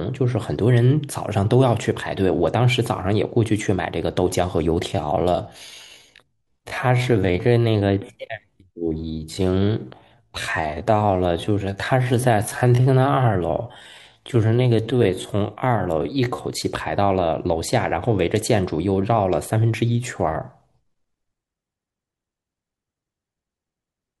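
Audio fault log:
4.84–16.46 s, time-stretched section: software likely stretched this stretch of speech to fill a longer slot, slowing it to 0.66 times its pace by repeating short pieces while holding pitch, so the pace drops abruptly, pitch stays put, and the speech drags.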